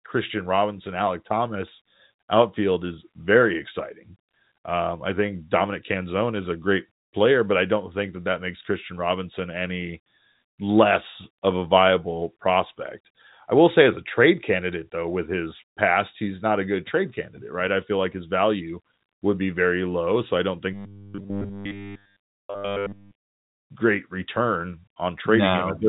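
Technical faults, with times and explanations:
20.73 to 23.48 s, robotic sound from repeated short buffers: after "I don't" the speech turns into a stiff metallic buzz at 100 Hz until "great return". That pitch fits a 10 ms chunk looped nearly continuously, likely because new audio arrived too seldom.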